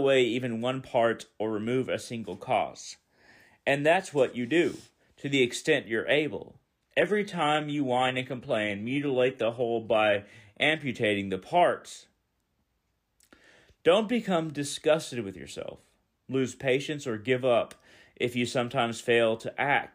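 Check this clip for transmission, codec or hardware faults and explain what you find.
One fault is present: an adaptive stream at a lower bitrate, from 6.68 to 10.68 s. After "the extent you're able", the stream dropped to a lower-quality version for four seconds. Treble turns thin and synthetic, which fits a low-rate HE-AAC stream. Full quality returns suddenly at "the parts", with no gap.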